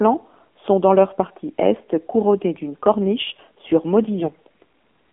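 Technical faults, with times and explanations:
Throughout: AMR narrowband mobile codec. The speech sits in a 200 Hz to 3.4 kHz line band and sounds buzzy and synthetic, typical of a sparse 7.4 kbps AMR-NB encoding.
4.19 to 4.36 s: AMR bit errors. Right after "couronnés d'une corniche sur", flipped bits at a rate of a few percent turn the speech hoarse and gargly while pitch and level hold.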